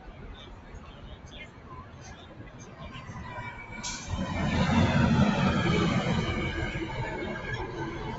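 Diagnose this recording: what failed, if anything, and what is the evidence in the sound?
The failure sits in call processing. A noise suppressor built for speech was applied to music or sounds, and it treats the steady parts of this audio as noise. Gain swings by roughly 15 dB, so sustained material pumps and thins. On a spectrogram, held energy below the call path's 8 kHz ceiling breaks into fading blotches while onsets stay bright.

From 0.0 to 2.81 s, sound is cut by the noise suppressor. About two seconds in total sink by up to about 7 dB, and decays are clipped short. The waveform envelope shows sudden hollows after each attack, and in the spectrogram the tails end abruptly instead of tapering.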